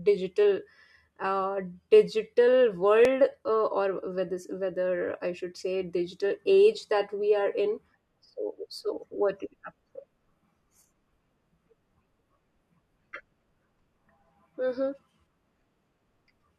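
At 3.05 s the speech jumps forward abruptly with no gap of silence. Only a tiny slice of audio, a millisecond or two, goes missing, so no part of a word is audibly lost. This is likely a dropped buffer (overrun): the recording software fell behind, the hardware overwrote a block of samples before they were read, and the audio on either side was butted together.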